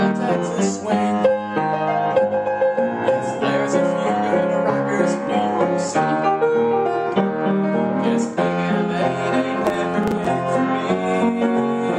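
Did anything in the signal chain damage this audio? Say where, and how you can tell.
Yes, processor overload crackle at the driver and buffer stage. From 9.65 to 10.26 s the processor fell behind and missed a string of buffer deadlines, perhaps a dozen or more, each leaving a tiny hard-edged gap where that slice of audio was skipped. The closely packed clicks point to very short buffers of around a millisecond and a half, and together they sound like a gritty tearing crackle over the sound that stops once the load eases.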